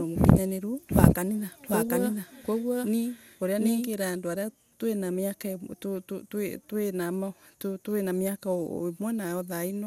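From the very start until 3.9 s the speech runs on top of itself in a doubled audio track. A second, equally loud copy trails the first by roughly 0.7 s, likely from the same signal being captured again by a slower path or an edit holding two copies out of step. The echo is full-band and dry, with no decay or room colour. It is already running when the clip begins and stops abruptly at 3.9 s. On a waveform, each syllable envelope reappears at matching height about 0.7 s later. On a spectrogram, the formant patterns are duplicated and shifted along the time axis.

Throughout the clip, generation loss gives the audio a swirly, hollow, smeared character, and consonant attacks sound softened rather than crisp. This is likely from repeated lossy decoding and re-encoding, around fifteen passes, in a chain that fits MP2 at 128 kbit/s. Each pass requantises on a shifted frame grid, so the noise accumulates. 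A spectrogram shows nothing above 16.6 kHz, with a hard ceiling, and speckled noise between the harmonics below it.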